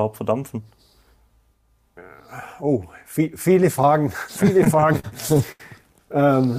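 From about 4.57 to 5.61 s you get repeated stalls, a stutter: nine short hitches where packets came in late and the jitter buffer kept running dry. The receiver held the last sound over each gap, the longest about 79 ms, so roughly a fifth of that stretch drags, but nothing's actually lost.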